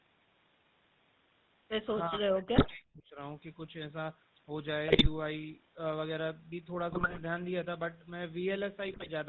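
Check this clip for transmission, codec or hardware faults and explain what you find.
Three kinds of fault are audible in this speech clip: GSM full-rate coding throughout, one stretch of suppressed speech, and four bursts of GSM bit errors.

The GSM full-rate codec character runs through the whole clip and is plainly audible. The speech has the buzzy, gravelly texture of a coder that models the vocal tract and excites it with a sparse, regularly spaced pulse train, discarding most of the excitation detail. Nothing comes through above 4 kHz, so sibilants and breath noise are dulled. The sound fits the 13 kbps full-rate codec.

From 2.07 s to 3.19 s the speech sinks and breaks up for roughly a second in total, falling at its lowest point by around 40 dB, close to silence. The likely cause is speech suppressed in double talk. When both ends talk at once, an echo canceller that cannot tell the near talker from loudspeaker echo attenuates everything, so this talker's speech is ducked and chopped into fragments.

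GSM bit errors appear four times, at 2.56 to 2.77 s, 4.88 to 5.07 s, 6.90 to 7.21 s and 8.88 to 9.09 s. Each burst lasts about a fifth to a third of a second and brings squawks, pops and a gargling quality. Corrupted bits on a weak radio link reach the decoder, where damaged filter, pitch and gain parameters warp the spectrum or spike the level frame by frame. The density of the damage points to an error rate of a few percent.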